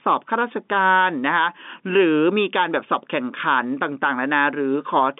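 Nothing in this speech clip stands out as a technical fault: the sound sits within the narrow band of G.711 mu-law telephone coding, roughly 200 Hz to 3.6 kHz with nothing above 3.8 kHz, and shows at most a faint trace of the noise that format's 8-bit logarithmic coding leaves behind.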